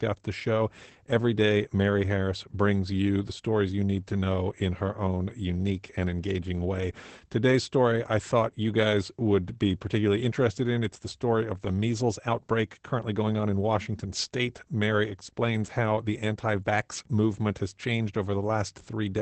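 Opus voice compression runs throughout the speech. Nothing sounds above 8.5 kHz. Coarse SILK coding leaves it muffled and hoarse, which fits about 12 kbps.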